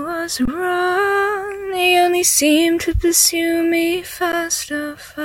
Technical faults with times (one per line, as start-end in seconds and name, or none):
0.45-0.48 underrun with held sample
4.32 underrun with held sample